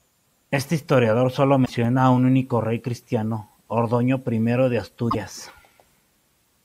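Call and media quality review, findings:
Short glitch at 1.62–1.70 s, between "historiador solo" and "a un único rey". Damaged data in a compressed stream: corrupt bytes, decoder loses frame sync and resyncs at the next header. Second glitch at 5.08–5.15 s, same mechanism, about 80 ms each. Component: transport or storage upstream of the decoder.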